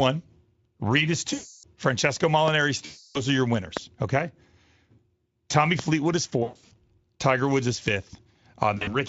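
VoIP packet loss concealed by the speech codec appears first at 1.33 to 1.65 s and again at 2.85 to 3.18 s, each a solid 300 ms gap. The decoder extends the last pitch and filter shape and lowers the gain, so the sound smears into a buzzy, fading tone before recovering. Loud pops at 3.77 s and 5.79 s sit about 20 dB above the signal. Each is a single sharp click over continuing audio, likely from an electrical transient such as a switch or static discharge. Packet loss returns in scattered form at 6.43 to 6.73 s, with runs up to 120 ms, and briefly at 8.77 to 8.97 s, with runs up to 40 ms. These produce shorter stuttering patches of buzz rather than one long smear.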